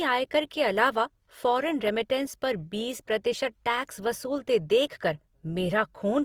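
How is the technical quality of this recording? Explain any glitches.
The recording has one fault that runs through the whole clip: plainly audible codec damage.

Opus compression, throughout the clip: the speech has a rough, grainy texture, most likely from Opus encoding in its music-oriented mode at a low bitrate around 24 kbps. With too few bits, the encoder keeps each frequency band's overall energy but fills in fine detail with folded copies of lower bands or noise. Harmonic detail turns hissy and coarse rather than swirly. Bandwidth stays full, with content reaching about 20.2 kHz.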